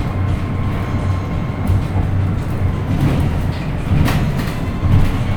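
Sounds, with no audible technical faults anywhere in the recording.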